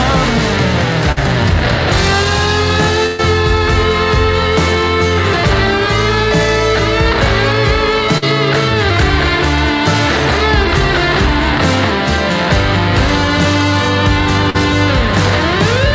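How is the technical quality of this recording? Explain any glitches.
The recording has four brief dropouts typical of a network call, heard over a band-limited sound with nothing above 8 kHz, which points to a wideband call codec such as G.722 at 64 kbps.

Short concealed packet loss occurs at 1.12 to 1.18 s, 8.18 to 8.24 s and 14.50 to 14.56 s. Each time about 40 ms never arrived, and the receiver extended the preceding sound before blending back. The result is a quick smear or wobble. Unlike a burst, nothing audibly fades.

A burst of packet loss runs from 3.06 to 3.20 s. About 120 ms went missing in one stretch, roughly three times the short losses. The receiver prolonged the last sound while lowering it, producing a held, decaying buzz or hiss. The audio then resumes further along, with that portion gone.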